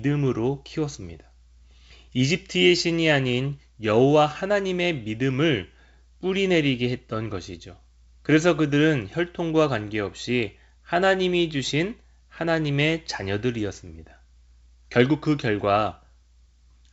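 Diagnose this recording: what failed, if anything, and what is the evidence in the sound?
Nothing stood out on listening to this speech recording, which comes through the G.722 wideband telephone path at 64 kbit/s with speech clear up to about 7 kHz.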